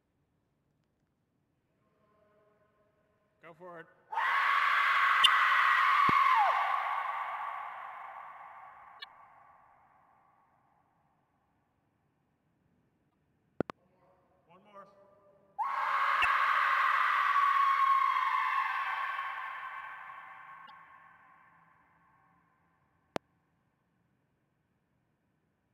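A recording of everyday sound, with sample clock jitter throughout: timing wobble of around 2 µs leaves a roughness some 35 dB below the signal, rising on loud, bright passages and vanishing in silence. Damaged data in a compressed stream appears at 5.20–5.26, 8.97–9.04, 13.07–13.14, 16.19–16.25 and 20.63–20.71 s, where the decoder loses sync and searches for the next frame before resyncing. A loud pop, sharp and about 15 dB above the sound, lands at 6.09–6.11 and 23.16–23.18 s, with a double pop at 13.61–13.72 s, likely from a voltage step or pulse such as a plug or switch, while the sound continues underneath.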